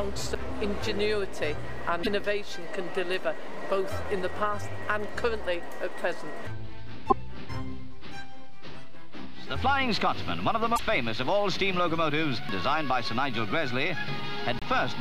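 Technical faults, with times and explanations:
0.35 s, CD skip: a tick with a very brief mute, only a few milliseconds, then the audio resumes from a different point. The laser has jumped to another turn of the disc's spiral, so playback lurches forward or back by one or several revolutions.
2.03–2.07 s, 7.09–7.13 s, 10.75–10.79 s and 14.59–14.63 s, broken MP3 bit reservoir: each is a short chirp, burst of noise or hole lasting about 30 to 45 ms as the audio jumps ahead. The likely cause is dropped MP3 frames, which fits frames of 26.1 ms. The following frames reach back into the bit reservoir for borrowed data and decode bytes from the wrong frame.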